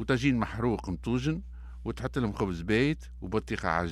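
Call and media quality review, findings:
Mains hum, full length of speech clip: steady 60 Hz tone about 15 dB under the signal. Probable ground loop or nearby transformer coupling the power line in. Fixed pitch and constant level mark it apart from traffic rumble or handling noise.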